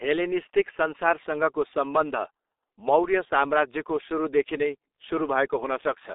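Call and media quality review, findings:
G.723.1 codec artefacts, whole clip. Speech muffled and hoarse, consonants smeared. Nothing above 3.8 kHz; telephone band about 300 Hz to 3.7 kHz. Low-rate 6.3 kbit/s coding, 30 ms frames. Slow voice-model updates blur fast transitions. Heavy damage.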